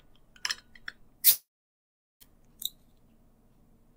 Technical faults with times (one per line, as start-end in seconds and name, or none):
1.29-2.23 long network dropout